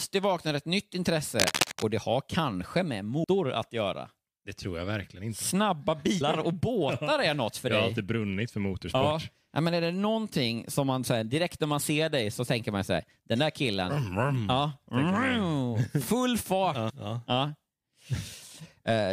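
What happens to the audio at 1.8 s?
At 1.8 s the speech is covered by cable scratch noise, which runs from about 1.40 to 1.91 s, starting just after "vaknade ett nytt" and clearing before "det har kanske med". The sound is a dense, irregular scratching and rustling roughly as loud as the speech itself. The likely cause is a worn cable, connector or control being moved, so its contact resistance fluctuates rapidly and injects uneven bursts of noise into the signal.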